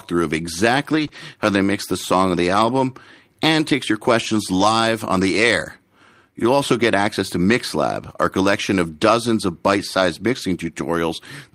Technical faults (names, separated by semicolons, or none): lost packet rebuilt from error correction; short concealed packet loss